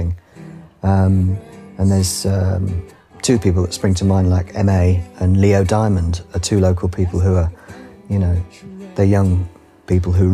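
Nothing stood out as technically wrong on listening to this audio.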